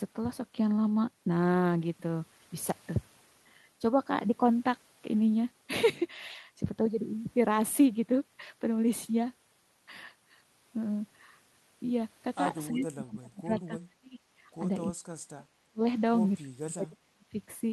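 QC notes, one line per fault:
12.69–13.5 s, 13.67–14.19 s, 14.92–15.53 s, 15.69–15.82 s and 16.43–17.37 s: speech suppressed in double talk. The speech falls away in pieces, dipping by roughly 30 to 40 dB. The likely cause is an echo canceller attenuating this talker along with far-end echo during overlapping talk.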